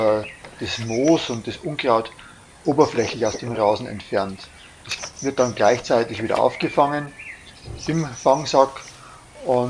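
No technical faults can be heard anywhere in this clip.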